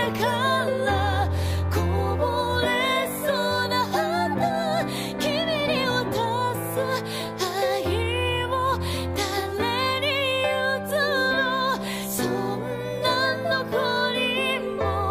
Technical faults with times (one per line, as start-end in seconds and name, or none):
none